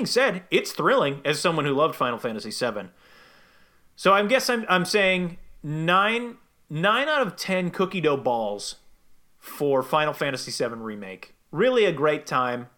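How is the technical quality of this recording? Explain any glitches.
The technical quality of this recording is sound, with no glitches to explain.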